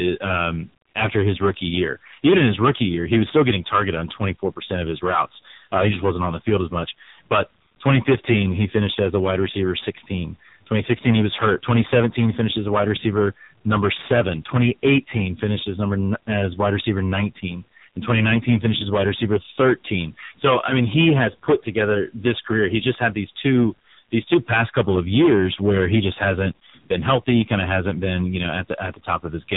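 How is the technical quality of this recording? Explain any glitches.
Poor: the speech is both heavily overdriven and squeezed through a low-rate mobile codec, and both faults last the whole recording.

Hard clipping: The level drives about 17 dB past what the chain can pass, flattening roughly one sample in twenty. This adds a harsh fuzz to every loud syllable.

AMR narrowband mobile codec: AMR-NB coding at a heavily starved rate, consistent with about 5.9 kbps, removes everything above 3.8 kHz. The voice sounds muffled, buzzy and synthetic throughout.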